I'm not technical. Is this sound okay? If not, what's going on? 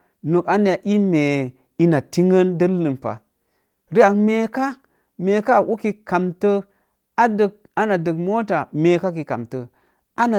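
Yes, nothing here is wrong with the sound. It has gone through Opus voice compression, which leaves the speech full-range with only light traces of its work.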